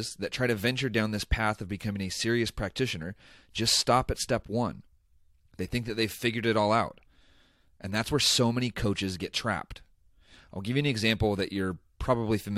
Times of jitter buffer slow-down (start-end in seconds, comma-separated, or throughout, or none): none